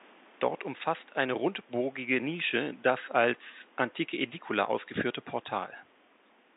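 No faults detected: the speech sits on telephone-band audio with nothing above 3.8 kHz, consistent with G.711 coding, over room noise about 30 dB below it.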